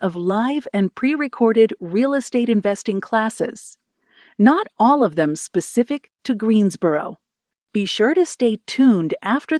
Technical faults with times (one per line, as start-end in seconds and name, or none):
none